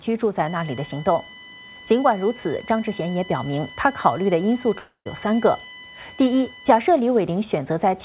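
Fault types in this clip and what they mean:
USB whine: A fixed-pitch whine runs from 0.46 s to 6.81 s, built on a 1 kHz tone with its strongest component at 9 kHz, the ninth multiple, and it sits roughly 15 dB below the sound. It comes from the bus's 1 ms frame current leaking in through power or ground. On a spectrogram it appears as thin horizontal lines spaced 1 kHz apart, brightest at 9 kHz.
long network dropout: Between 4.78 s and 5.07 s about 280 ms of audio is lost, most likely a run of packets that never arrived. The receiver covers 274 ms of it by continuing the preceding sound as a buzz that fades, with about 120 ms left near-silent, and then the audio resumes without the missing part. On a waveform the envelope decays to a flat line before an abrupt return. A spectrogram shows a smeared, repeating texture fading into a dark band.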